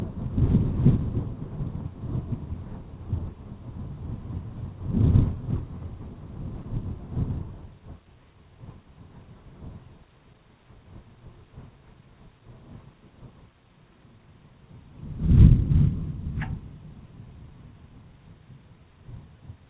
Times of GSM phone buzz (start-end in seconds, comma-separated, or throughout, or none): none